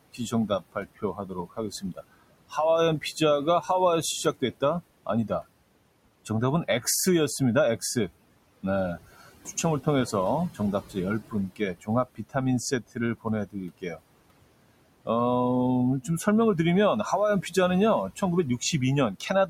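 From start to finish there are noise suppressor artifacts. The room noise, about 17 dB under the speech, is pulled down by about 21 dB in gaps and swells back beneath syllables. On a spectrogram the noise floor flickers in patchy, frame-sized blotches.

Speech cut by the noise suppressor happens in four spans: 0.13–3.69 s and 8.63–14.01 s, each with roughly a second of swallowed speech dropping up to about 20 dB, plus briefer dips at 4.24–5.43 s (about 13 dB) and 18.1–19.49 s (about 11 dB). The waveform shows sudden holes in the envelope, and the spectrogram shows speech energy turned down along with the background.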